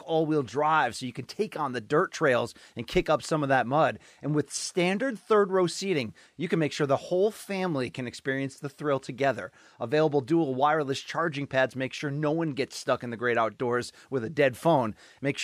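No technical faults can be heard anywhere in this speech recording.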